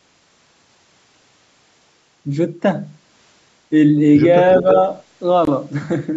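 From 4.54 to 4.79 s an echo leak is audible: a faint, delayed copy of the speech trails the talker by about 325 ms, sitting roughly 15 dB below the direct voice. It comes across as a ghost of what was just said, lasting only a quarter of a second. The likely cause is a far end playing the call over a loudspeaker, where the echo canceller let part of the microphone pickup through and sent it back down the line.

Inside that echo window, from 4.62 to 4.67 s, there is speech suppressed in double talk. For about 50 ms the talker's level sags by roughly 5 dB, a brief dip rather than a full cut. This is likely the echo canceller facing both sides at once, failing to tell the local voice from the returning echo and turning everything down together, so the genuine speech is attenuated along with the leak.

At 5.45 to 5.47 s a Bluetooth stall cuts the audio to silence for 21 ms before it resumes. 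The likely mechanism is radio interference delaying packets to the headphones, letting their playback buffer run empty until the retransmitted data arrived. The band stops at 8 kHz throughout, consistent with call microphone processing.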